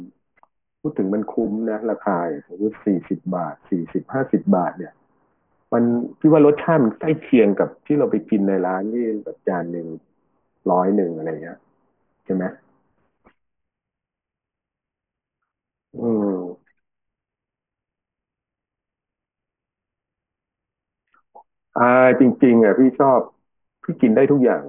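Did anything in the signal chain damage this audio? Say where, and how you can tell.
Yes. The damage is aliasing at the sample-rate conversion stage, audible for the whole of the speech. Sibilants and fricatives come out gritty and metallic, and the spectrum runs hard up to a ceiling at 3 kHz, which fits a drop from 48 kHz to a 6 kHz rate. Everything above 3 kHz was never filtered off first, so it folded back below that edge as unrelated tones, sitting roughly 30 dB under the speech.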